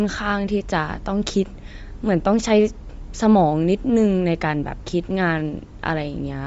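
A speech recording with audible codec damage from start to end. The upper band is noise-filled and grainy, giving a breathy edge, and nothing sounds above 7.7 kHz. This is likely Bluetooth LC3 compression, consistent with about 32 kbps in 10 ms frames.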